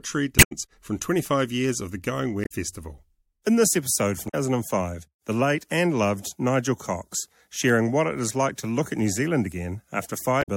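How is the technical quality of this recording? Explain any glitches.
The recording is marred by two kinds of glitch in this speech clip.

Damaged data in a compressed stream appears at 0.35–0.52 s, 2.44–2.52 s, 4.25–4.35 s and 10.39–10.48 s. Corrupted bytes make the decoder misread frames and hunt for the next valid header, so each spot is a brief chirp or squawk.

CD scratch ticks occur at 1.12–1.53 s (four ticks) and 7.15–7.70 s (five ticks). A blemish defeats error correction once per disc rotation, and the player conceals the loss, leaving regular clicks, the longest about 1.5 ms.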